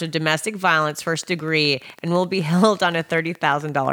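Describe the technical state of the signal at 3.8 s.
A steady ticking, about 11.8 clicks per second at a regular pace and roughly as loud as the speech, runs over the sound at 3.8 s. It is a train of clicks from 0.82 s, just after "with domestic", to the end at 3.93 s, likely interference from nearby equipment injecting similar pulses.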